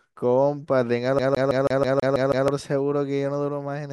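Speech, with a CD stuck on one turn from 1.19 s to 2.48 s. Over that span a single 162 ms slice of audio repeats eight times in a rapid, evenly spaced stutter, each pass separated by a brief dropout as the pickup jumps back. The cause is a disc defect that kicks the laser back one track at the same point every rotation, so playback cycles the same fragment instead of advancing.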